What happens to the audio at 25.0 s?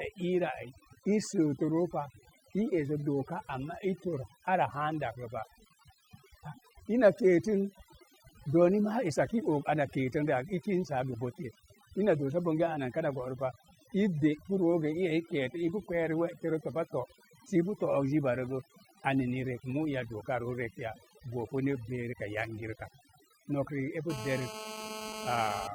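At 25.0 s a GSM phone buzz sits over the speech, running from 24.10 s to 25.67 s. A 2G handset in a call nearby pulses its transmitter about 217 times a second, and the audio circuitry rectifies those radio bursts into a harsh, raspy tone at 217 Hz, packed with harmonics and only about 10 dB below the speech. Unlike mains hum at 50 or 60 Hz, which is smooth and low, this buzz is gritty and nearly steady, as a call keeps the bursts regular.

Under the buzz, overdone noise removal affects the whole recording, this moment included. The noise reduction was set too aggressively, so individual frequency bands that fall near its noise estimate are cut hard or switched off, taking the quieter parts of the speech with them. The background drops and breaks up into twinkling specks.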